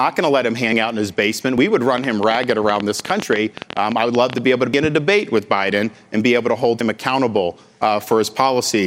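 At 0.73 and 1.58 s the sound skips ahead, likely a dropped buffer (overrun) losing a short chunk. The waveform shows a hard splice, and the spectrogram a thin vertical line. From 1.98 to 4.39 s a train of clicks, about 11 per second and irregularly spaced, ticks through everything, including pauses. These show as repeated vertical streaks and sharp spikes standing well above the signal. Within it, at 3.22 s, and again at 4.74 and 6.81 s, further skips occur. The last two are longer, around 70 ms, so more of the sound is lost.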